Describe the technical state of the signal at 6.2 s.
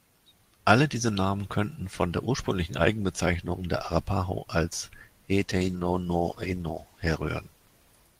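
At 6.2 s the speech is inside a call bitrate drop that runs from 5.34 s to the end. The encoder's rate falls from 32 to 13 kbps, bottoming out for about 1.5 s. Coarser coding and a lost top end leave it rough and muffled.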